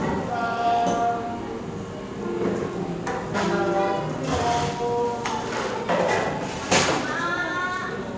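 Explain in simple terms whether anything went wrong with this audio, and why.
At 3.34 s a piece of audio was dropped, a skip ahead, so the sound jumps forward, losing about 0.4 seconds with no gap.

From 4.18 to 5.41 s the jitter buffer speed-up trimmed tiny slices to catch up, making the sound run about 4% faster without changing pitch.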